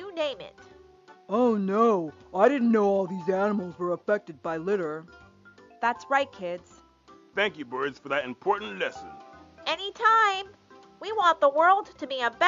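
No technical faults can be heard anywhere in the signal, and every part of it holds together without interruption or disturbance.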